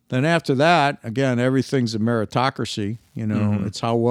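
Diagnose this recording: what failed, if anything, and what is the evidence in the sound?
Wi-Fi interference entered at the analogue wiring stage. From 2.40 s, after "that again everything's a", a faint ticking about 50 dB below the speech runs to the end, repeating every 102.4 ms. A nearby radio's beacon is being rectified by the circuit, which shows as evenly spaced thin vertical lines on a spectrogram.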